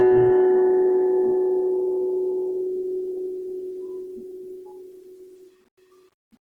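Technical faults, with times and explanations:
Throughout, Opus compression: a likely bit-starved Opus encoder, consistent with about 16 kbps, fills bands with noise, so the music turns grainy and rough while still reaching 20.1 kHz.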